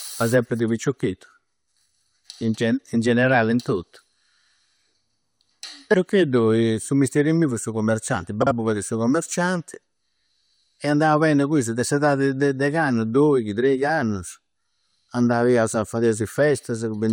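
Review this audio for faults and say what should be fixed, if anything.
Between 8.42 and 8.52 s the decoder received two neighbouring blocks of frames, each about 43 ms, in swapped order and played them that way. The frames out of order produce a brief garbled flutter, though no time is lost. Sequence-number checking with a reorder buffer ahead of the decoder would prevent this.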